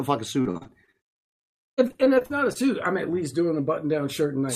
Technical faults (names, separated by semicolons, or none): repeated packet loss (robotic sound); jitter buffer slow-down; jitter buffer speed-up